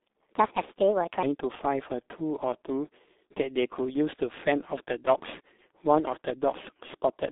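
Throughout the speech, the sound carries G.723.1 codec damage, and it is heavy. Nothing reaches above 3.8 kHz, and the band sits at about 200 Hz to 3.7 kHz. The slow, coarse voice modelling fits a 6.3 kbit/s stream, leaving muffled, hoarse speech with smeared consonants.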